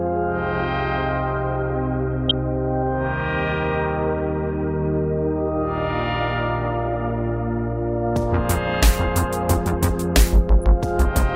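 At 2.28 s comes a short burst of DAB burbling, about 50 ms long. At 10.59 s a second, shorter burst lasts about 40 ms. Both sound like short blips of noise over the sound. Weak reception let bit errors slip past the error correction into the MP2 data. The first burst points to an error rate near a fifth of a percent. Corrupted samples put short blips of noise into single sub-bands.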